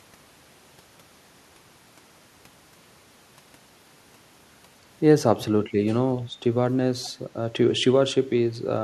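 At 7.03 to 7.1 s an echo leak appears, likely because a loudspeaker on the far side fed back into its microphone and the echo canceller let some of it through. A faint copy of the speech returns about 456 ms late, roughly 25 dB below it.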